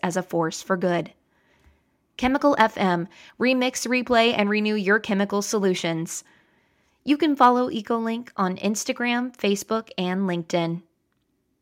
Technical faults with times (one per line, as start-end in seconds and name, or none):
none